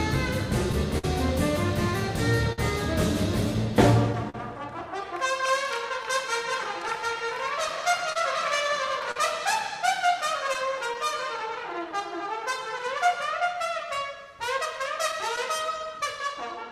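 The whole way through there's clock drift between sender and receiver: the sender's clock runs roughly 4 percent slow, so the buffer keeps starving and small hiccups recur unevenly. At 0.98 to 1.04 s and again at 2.52 to 2.59 s you get a short stall from a late packet, where the last sound gets held for about 52 ms until the data turns up. Nothing's lost, just a brief hold. From 3.72 to 11.72 s there are scattered short gaps, around fifteen of them, each patched by extending the previous sound, the longest maybe 40 ms, so you hear little ticks and smears. Overlapping that, from 5.01 to 16.64 s, come repeated timing corrections: the receiver stretches playback to 98 percent speed, adding around a fifth of a second overall, which comes across as a slightly unsteady, dragging tempo. Then from 12.78 to 15.64 s another patch of scattered short gaps shows up, about seven, all tiny, around 15 ms at most.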